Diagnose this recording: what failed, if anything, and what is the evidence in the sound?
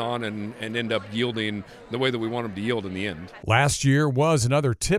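Nothing failed: the speech carries no audible dropouts, clicks, clipping, pitch or timing errors, or other artefacts that would point to a failure at any stage of the chain.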